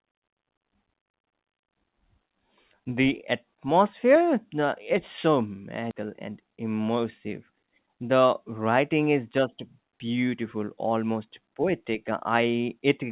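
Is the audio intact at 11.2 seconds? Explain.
Yes, at 11.2 seconds the speech is intact, with no dropout, glitch or other fault at that moment, just the steady narrowband sound of a G.711 call path that carries nothing above 4 kHz.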